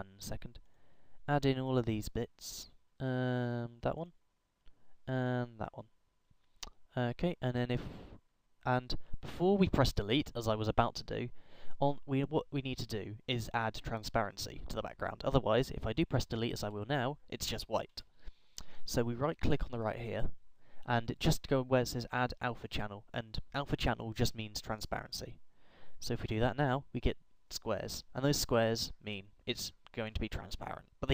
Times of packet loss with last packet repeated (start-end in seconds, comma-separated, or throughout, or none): none